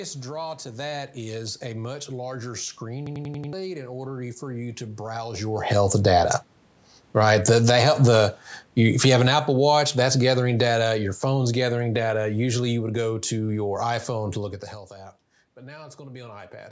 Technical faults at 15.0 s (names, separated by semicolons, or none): none